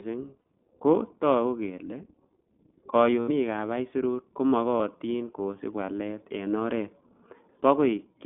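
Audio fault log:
Throughout, iLBC codec: the speech comes through narrowband, roughly 200 Hz to 3.4 kHz, with nothing up top. At 15.2 kbps, each 20 ms frame is coded on its own, and you can plainly hear that rough, slightly synthetic edge.
0.40 to 0.46 s, 3.20 to 3.29 s and 4.78 to 4.81 s, lost iLBC frames: three dropouts of 60, 80 and 20 ms, landing just before "ko togu kele", just before "ab aisurut", and between "ab aisurut" and "kosiib walet en oret". Each gap is filled by a held, faintly buzzy vowel where the decoder repeats the last pitch cycle with noise, and since the frames stand alone, the voice snaps back cleanly right after.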